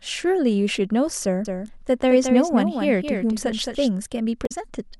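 From 1.45 to 3.89 s the speech carries a doubled audio track: a second full-band copy trailing about a fifth of a second behind, only a few dB quieter. Unlike a room echo it has no decay or colouring, and it switches on and off abruptly. Likely a second capture path running late.

At 4.45 to 4.52 s there is damaged data in the compressed stream. The decoder misreads corrupted frames and resynchronises, producing a brief glitch.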